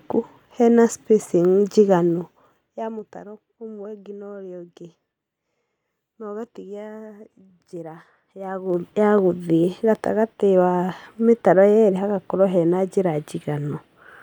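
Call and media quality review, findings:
Zipper noise, 1.94–3.22 s, after "hena spacing", before "ũmwe ũngĩ na urĩa": ticking as level drops about 20 dB in 2 dB steps, roughly ten per second. Gain stage steps without smoothing. Waveform: staircase envelope. Spectrogram: thin broadband vertical line at each step.

Zipper noise, 8.38–8.86 s: faster zipping as level rises about 20 dB in 2 dB steps, roughly 30 per second. Same missing gain ramp. Waveform: short rising staircase. Spectrogram: dense comb of vertical click lines.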